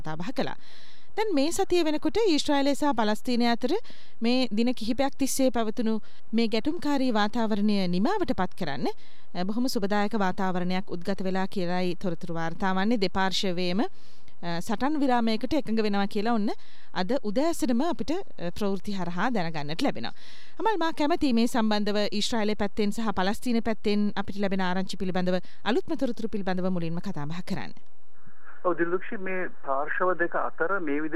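A DC offset runs through the entire clip: the waveform sits displaced from zero by a constant amount, at about -27 dBFS. Because a fixed shift has no frequency above zero, it cannot be heard as a tone. Instead it appears as a steady component at the very bottom of the spectrum, and it eats headroom on one side of the waveform, so peaks in that direction reach full scale sooner than they should.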